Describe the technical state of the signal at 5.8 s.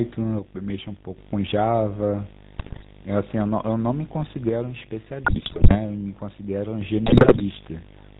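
A 50 Hz buzz with hash above it and a high whine near 15.6 kHz sits under the speech, about 15 dB below it; this is video or display buzz, a screen or video cable coupling its field rate and line rate into the audio.

The speech is buzzy and gravelly, with nothing above 4 kHz. That is the GSM full-rate codec at 13 kbps, rebuilding the voice from a vocal-tract model driven by sparse, regularly spaced pulses.

The sound and its background noise sit together about 5 dB lower than before, a drop that began with a step at 4.49 s and lasts until 6.81 s. This is a sudden gain jump, likely a digital gain change applied in one sample with no ramp.

Squawks and gargling end at 5.79 s, just before this moment. These are GSM bit errors, where corrupted filter, pitch and gain values reached the decoder between 5.24 and 5.79 s.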